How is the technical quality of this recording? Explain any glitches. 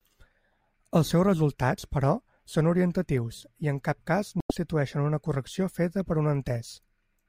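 The recording has one glitch, caused by damaged data in a compressed stream. From 4.38 to 4.51 s, just after "i en cap cas", corrupted bytes make the decoder misread frames and lose sync, giving a short glitch. The waveform shows an abrupt discontinuity.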